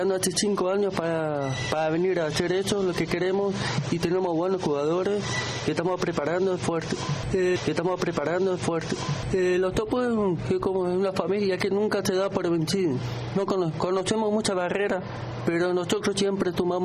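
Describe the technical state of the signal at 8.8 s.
At 8.8 s you're inside a stream segment repeat running from about 7.55 to 9.55 s. The player queued the same chunk twice, so roughly 2 s of audio plays over again, with a small blip where it jumps back.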